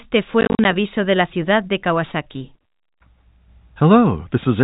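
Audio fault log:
0.41–0.65 s, packet loss filled with silence: Holes totalling 130 ms are scattered over 240 ms, the longest 40 ms, just before "aviso de la ciudad". Silence replaces missing audio, leaving hard edges. The pattern points to roughly a dozen 10 ms packets lost.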